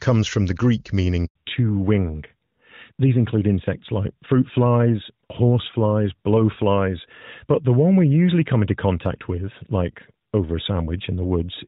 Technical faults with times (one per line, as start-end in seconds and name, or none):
1.25-1.35 handover gap
1.35-11.68 fallback to narrowband